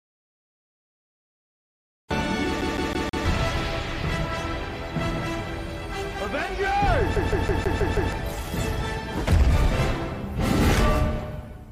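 At 2.61 to 3.25 s and again at 7.16 to 8.13 s, a CD stuck on one turn replays the same 0.16 s slice, four times then six, as the laser jumps back each revolution; the waveform shows identical repeating blocks separated by brief flat mutes.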